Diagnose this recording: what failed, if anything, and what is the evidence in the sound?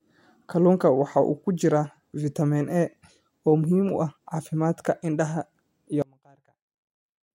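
From 6.02 s, right after "caafimaadka indhaha iyo", the speech collapses by about 31 dB and stays that way to the end, leaving only a faint trace of the voice. That's the signature of one channel inverted: the voice is identical in both channels, so with one polarity flipped it cancels almost completely in the mono sum. The likely culprit is a polarity swap in the analogue wiring on one leg of the stereo path.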